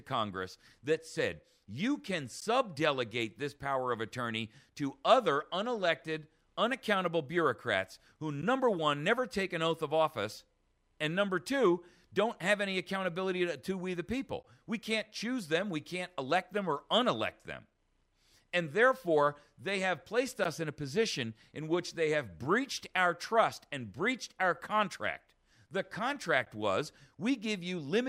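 At 2.41, 8.42, 14.43, 20.44 and 26.45 s the sound drops out for 12 ms, a gap between chunks. The audio was delivered in 6-second pieces, and each join leaves a short stretch of silence instead of continuing seamlessly. Nothing is missing from the material itself. The interruption is heard as a brief, hard-edged hole, recurring with a steady six-second rhythm.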